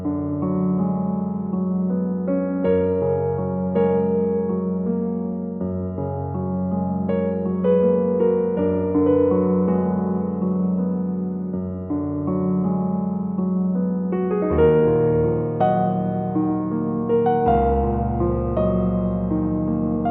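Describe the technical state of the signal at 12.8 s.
At 12.8 s the signal is intact, with no audible dropout, distortion, clipping or other technical fault at that point.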